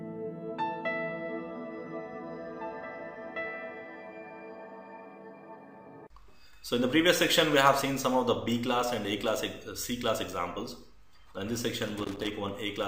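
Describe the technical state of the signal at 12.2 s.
At 12.2 s the signal is inside a burst of loose connector crackle running from 11.87 to 12.27 s. A worn or dirty contact is making and breaking as it shifts, so the audio is chopped on and off, heard as irregular scratching. On the waveform this shows as jagged dropouts and sharp spikes; on a spectrogram, scattered broadband vertical streaks across the whole frequency range.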